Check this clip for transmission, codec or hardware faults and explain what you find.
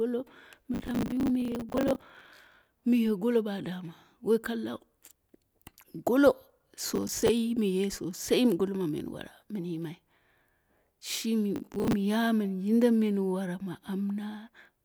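There's one fault here, processor overload crackle, in three bursts: 0.74 to 2.67 s, 6.89 to 7.29 s, and 11.56 to 11.93 s. The CPU keeps missing deadlines on short buffers of around 10 ms, replaying stale audio, so the speech gets a gritty, tearing crackle.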